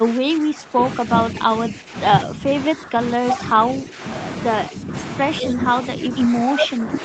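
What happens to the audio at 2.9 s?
Speech suppressed in double talk, from 2.67 to 2.99 s: the level dips by up to about 15 dB for roughly a third of a second. This is likely the echo canceller mistaking overlapping far-end sound for echo and turning down the talker along with it.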